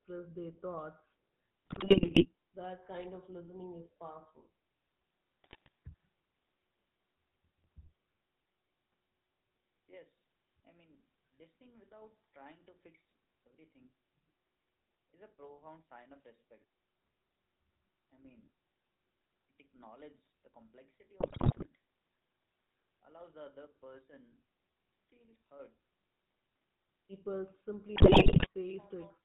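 Across the whole recording the speech carries the buzzy, gravelly roughness of the GSM full-rate codec, at 13 kbps. The vocal-tract model is driven by coarse, regularly spaced pulses, and nothing above 4 kHz survives. A spectrogram shows a hard ceiling at 4 kHz and smeared, grainy harmonics below it.

From 1.66 to 2.26 s, GSM bit errors break the voice into squawks, pops and gargling. Corrupted filter, pitch and gain values reach the decoder, so individual frames get a bent spectrum or a sudden jump in level. On the waveform these show as abrupt spikes. The spectrogram shows blocky, frame-sized smears of misplaced energy.

Right after, from 2.40 to 2.46 s, the voice dips briefly by roughly 15 dB. This is speech suppressed in double talk, likely caused by the echo canceller mistaking the talker for loudspeaker echo while both sides spoke and turning the signal down. The waveform shows a short notch in the envelope.

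The same bit-error garbling returns at 5.44 to 5.68 s, 21.20 to 21.67 s and 27.96 to 28.48 s. Each burst appears as clustered level spikes and distorted frame blocks. The last burst has the highest error rate.

In the final moment, from 29.10 to 29.24 s, the level sags again by about 10 dB in the same double-talk pattern. Room noise sits about 38 dB below the speech.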